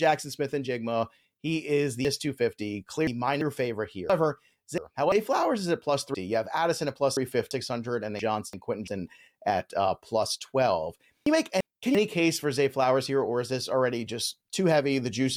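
Chunks out of order at 2.05–3.41 s, 4.10–5.12 s, 6.14–7.51 s, 8.19–8.88 s and 11.26–11.95 s: a 341 ms chunk plays one to three chunks late, jumbling the speech.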